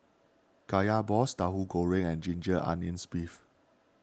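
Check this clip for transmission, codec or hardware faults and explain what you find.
I find no faults in the clip.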